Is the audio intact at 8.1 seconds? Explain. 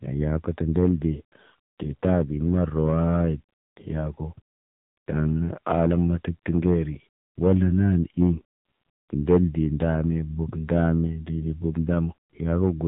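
No. At 8.1 s the speech falls inside a stretch of hard clipping from 7.43 to 8.30 s. Peaks overdrive the stage by about 6 dB and are sliced flat, and those squared tops generate high harmonics heard as harsh fuzz on the louder syllables. The same moment also carries the AMR narrowband mobile codec damage present throughout. Nothing above 3.8 kHz survives, and the vocal-tract model running on very few bits gives a plainly buzzy, synthetic timbre that fits a low mode of about 7.4 kbps.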